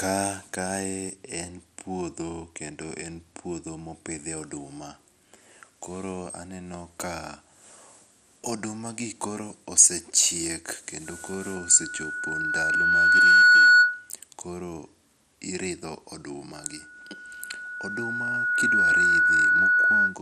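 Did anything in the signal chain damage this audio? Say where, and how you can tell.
Yes. Throughout, the sound is dull and gurgling with nothing above 14.4 kHz, likely MP2 compression at the codec stage. A spectrogram shows a hard ceiling and flickering upper bands.

A loudspeaker feedback squeal from the acoustic loop swells over about two seconds at 11.06–14.10 s and 16.55–20.19 s. It appears as a bright 1.5 kHz line, roughly 15 dB then 10 dB above the signal.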